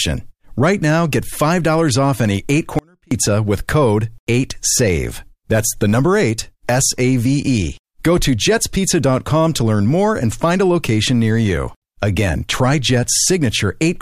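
The signal path likely lost its feed for about a third of a second while the output stayed live, an audio dropout to a faint residue from 2.79 to 3.11 s. The speech cuts out abruptly, leaving only a faint trace roughly 35 dB below normal level.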